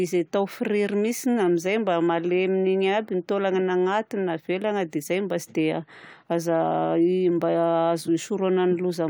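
Nothing stood out as a technical problem on listening to this speech recording.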